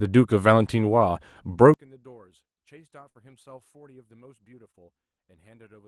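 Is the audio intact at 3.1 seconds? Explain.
No. From 3.09 to 3.17 s the speech briefly hangs: the last sound is stretched out and fades for about 55 ms, then the speech jumps ahead with about 60 ms missing. This is a burst of packet loss, where the receiver filled the gap by continuing and fading the last audio it had.

That moment also falls inside a longer problem from 1.74 s onward, where the speech drops by about 32 dB to a faint residue. The likely cause is one channel inverted, so the shared centre content cancels when the stereo is summed to mono.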